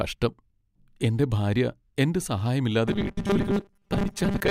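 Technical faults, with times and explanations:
2.88 to 4.51 s, robotic sound from repeated short buffers: the speech turns into a rigid, metallic buzz at a steady 200 Hz that still loosely tracks the syllables, and it continues to the end of the clip. The likely cause is new audio arriving too seldom, so the playback keeps looping the last small slice instead, which fits a 5 ms buffer. Roughly half of what is heard is repetition, with the real audio in those gaps skipped.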